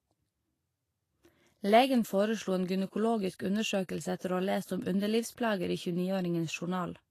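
Throughout the speech, the treble sounds hissy and grainy, with nothing above 14.2 kHz. This is likely Vorbis compression at a rate around 34 kbps, where high-frequency detail is quantised so coarsely that it turns into noise and the speech is audibly roughened.

From 4.17 to 4.21 s, just before "å ha lest om", a brief hiss of about 35 ms precedes a sharp onset. This is pre-echo: quantisation noise sized for the loud attack spreads across the whole transform block, filling the quiet gap before it and softening the attack.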